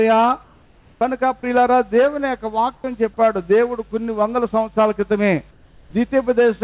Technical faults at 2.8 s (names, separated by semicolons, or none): comfort noise in place of the background; onset clipped by the voice detector